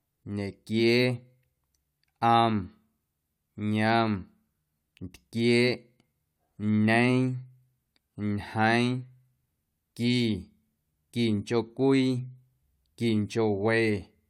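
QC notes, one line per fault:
No technical faults are present in the speech signal.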